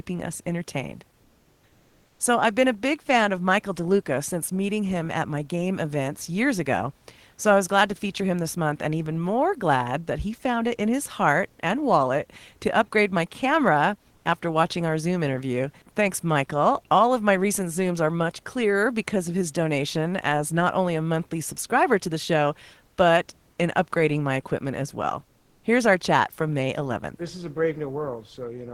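Speech with comfort noise in place of the background at 1.23–2.19 s, after "us entertained", and 25.39–25.63 s, after "my equipment as well". The room tone becomes flat, featureless hiss about 1–2 dB quieter, not true silence as a noise gate would give, likely from discontinuous transmission.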